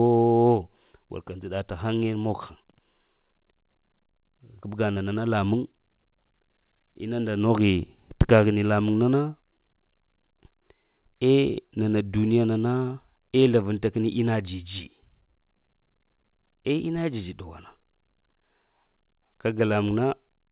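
At 4.94 to 4.98 s the speech briefly smears, with a short wobble where the sound should run cleanly. This is short concealed packet loss. About 20 ms of audio never reached the decoder in time, so the receiver stretched the preceding sound to cover the gap, then blended back into the real signal. The call band stops at 4 kHz, which fits a narrowband G.711 link.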